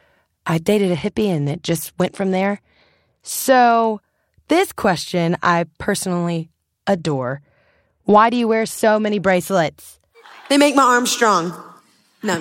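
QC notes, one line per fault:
0.80–3.88 s and 6.93–9.35 s (the second right after "this question I personally"), Bluetooth SBC bit pool drop: the link became congested and the sender cut the SBC bit pool to keep the stream going. The change in sound points to a fall from 31 to 11, roughly 83 kbps. With so few bits the highest sub-bands get starved and the rest are coarsely quantised, so the speech loses its treble and turns dull and gritty until the rate recovers.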